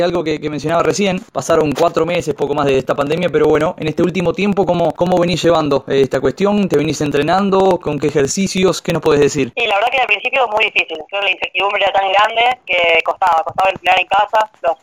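Periodic USB or driver dropouts run from 0.10 s to 14.79 s, every 0.054 s. Something repeatedly stalls the audio path, and roughly 10 ms of sound is skipped outright each time, leaving a steady train of ticks, about eighteen per second, heard wherever there is signal.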